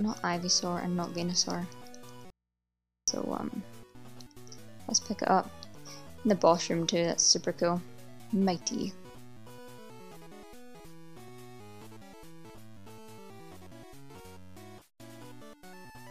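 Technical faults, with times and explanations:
2.30–3.08 s, audio dropout to a faint residue: the signal likely broke off while the input stayed open, so the sound cuts abruptly to faint mains hum for 0.77 s.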